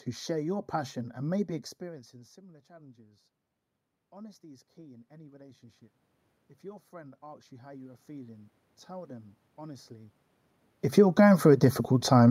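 Channel delay (comb filtering) colours the whole recording: one channel arrives a fraction of a millisecond late, and summing to mono cuts fixed, evenly spaced notches starting near 3 kHz. Unlike a muffled microphone, the hollow, phasey tone never changes.

Automatic gain rising appears three times. From 4.1 to 5.9 s, after the input drops by about 24 dB, the gain climbs about 3 dB. It rises about 6 dB from 6.61 to 10.19 s, and about 5 dB from 11.11 to 11.84 s. The room noise swells along with the voice each time, which distinguishes it from the talker's movements near 1.5 s and 10 s.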